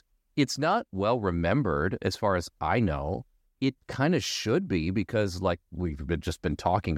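No audible technical faults.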